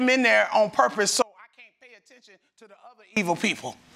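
At 1.22 s the signal drops out abruptly and stays gone until 3.17 s, a gap of about 1.95 s. This is an audio dropout to a faint residue: rather than silence, the gap holds a faint leak of the sound at roughly 30 dB below its normal level. The cause is likely a break in the feed while the downstream path stayed live. Both edges are hard cuts, with no fade in or out.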